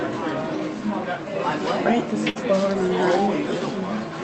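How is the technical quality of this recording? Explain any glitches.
One glitch is audible, a burst of packet loss, heard against sound carried over a call connection whose top end stops around 8 kHz. From 2.29 to 2.38 s, a short run of audio never arrived in time to be played. The receiver covered the gap by extending the last sound it had, fading it as it went. That concealment lasts about 58 ms. The sound then picks up further along, with roughly 60 ms of the original simply missing. You hear a brief held, dimming smear, then a jump forward.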